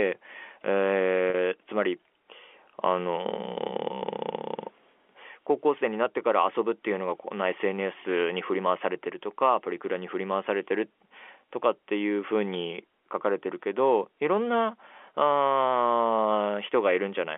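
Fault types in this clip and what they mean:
Packet loss with pitch repetition: around 1.30 s, about 40 ms of audio failed to arrive, which fits two lost 20 ms packets. The receiver bridged the gap by repeating the last pitch period, so the speech briefly hangs on a slightly buzzy, held tone before continuing.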